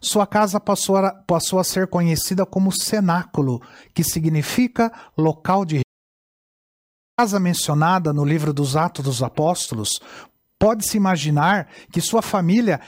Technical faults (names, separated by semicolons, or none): audio dropout to silence